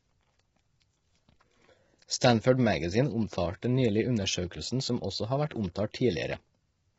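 Throughout the speech, likely low-delay AAC compression at a very low bitrate, around 16 kbps, with short frames that resolve pitch harmonics poorly, leaves the voice heavily rough and grainy, with noise filling the gaps between harmonics and nothing above 7.7 kHz.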